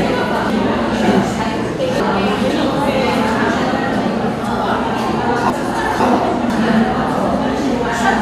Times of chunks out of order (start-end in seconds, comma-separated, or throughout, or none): 0.50-2.50, 5.50-6.50